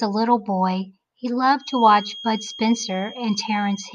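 From 1.55 s to the end, a feedback whistle sits behind the speech: a thin, steady 3.2 kHz tone around 20 dB down, wavering slightly in level. It is likely a loudspeaker-to-microphone loop hovering at the edge of feedback. A spectrogram shows a narrow horizontal line.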